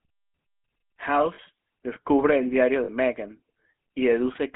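Throughout, the speech carries the buzzy, gravelly roughness of the GSM full-rate codec, consistent with 13 kbps coding. It rebuilds the voice from sparse pulse excitation. A spectrogram shows energy confined to roughly 200 Hz to 3.4 kHz, with coarse, smeared harmonics.

At 1.34 to 1.40 s and again at 2.84 to 2.89 s, lost GSM frames, about 40 ms each, consistent with two missing frames, were concealed by repeating the last good frame. Each sounds like a short metallic ring, appearing as flat, stretched harmonic bands.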